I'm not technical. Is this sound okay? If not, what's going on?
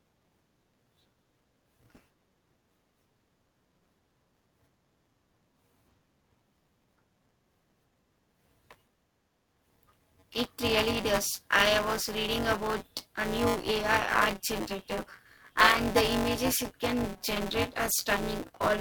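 No. Buffer tearing runs throughout: the buffer's writer and reader have slipped, so about a fifth of each chunk is older audio, causing a steady 188 Hz robotic buzz.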